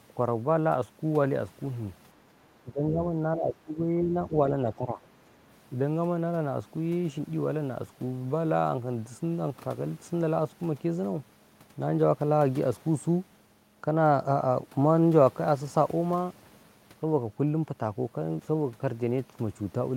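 Speech suppressed in double talk occurs from 2.63 to 3.19 s, 3.35 to 4.19 s and 4.76 to 5.0 s: the speech dips by roughly 15 dB at worst, then about 10 dB, thinning or breaking up. The likely cause is an echo canceller failing to separate this side's talk from overlapping loudspeaker echo and turning both down.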